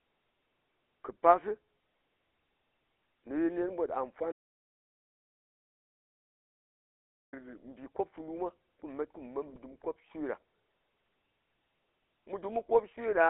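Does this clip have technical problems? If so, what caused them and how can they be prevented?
Yes. A GSM full-rate codec runs throughout: pulse-excited vocal-tract modelling leaves a buzzy, gravelly roughness, and the band is held to about 300 Hz to 3.5 kHz, which fits a 13 kbps link. Use a wideband codec or a direct recording instead.

An audio dropout to silence runs from 4.32 to 7.33 s: about 3 s of silence with no room tone, likely from a lost input while recording continued. Secure the connections and watch the input level.

GSM bit errors at 9.48 to 9.58 s corrupted decoder parameters, producing brief squawks and gargling pops that point to a handful of damaged frames. Record over a stronger link or capture locally.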